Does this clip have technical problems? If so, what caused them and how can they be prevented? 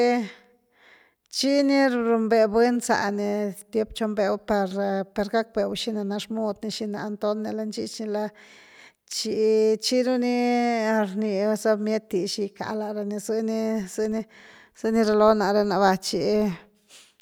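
Yes. From 13.76 s to the end at about 17.22 s, the speech carries a 25 Hz buzz that grows and shrinks with its loudness: a filter restarted on every block. The filter discards its internal state at each block boundary and starts again from silence, so each 40 ms block opens with a small transient. On a waveform these appear as tiny spikes every 40 ms, larger where the speech is louder. On a spectrogram they show as evenly spaced thin vertical lines, with a comb of harmonics at multiples of 25 Hz. To prevent it, keep the filter's state variables between calls and reset them only when the stream truly restarts.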